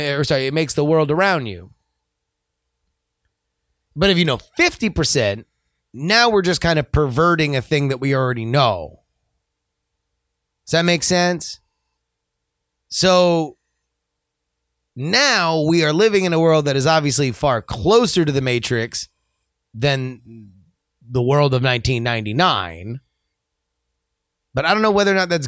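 No technical faults are audible anywhere in this recording.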